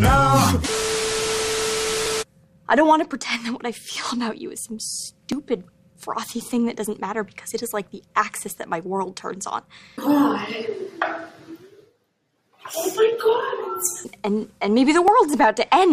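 From 2.06 s to 15.08 s, a short click recurs every 3.25 s, about five times in all. These are clock drift buffer slips: the pattern likely comes from two devices running on separate clocks that disagree by a few hundred parts per million. The buffer between them creeps until a block of several dozen samples is dropped or repeated. The strict, even spacing is what sets these apart from random clicks, dropouts or crackle.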